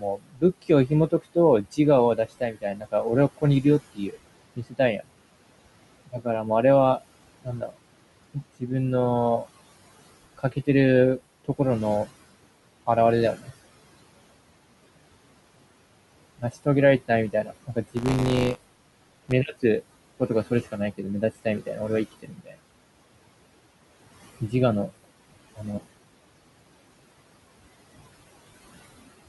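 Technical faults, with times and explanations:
Throughout: noise suppressor artifacts. Steady background is pulled down by about 21 dB frame by frame, so it sinks in pauses and rises under speech. A spectrogram shows the noise floor pumping between phrases, with speckled, flickering islands of leftover noise.
0.0–5.1 s, 6.06–9.46 s, 10.38–13.52 s, 16.39–22.6 s, 24.41–25.65 s: speech cut by the noise suppressor. Soft consonants and word endings were taken for noise and turned down by about 19 to 22 dB, sounding swallowed. This is heaviest near the start, where roughly one and a half seconds are affected, and lightest near 25 s. The waveform shows syllable tails clipped abruptly short, and the spectrogram shows high-frequency consonant energy missing.
17.96–19.33 s: buffer tearing. Writer and reader of the output buffer slipped, so each period contains a small slice of audio from about 20 ms earlier, hard-joined on both sides. 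This gives a robotic 100 Hz buzz, heard only under speech. The spectrogram shows evenly spaced vertical striations, and the waveform shows regular discontinuities.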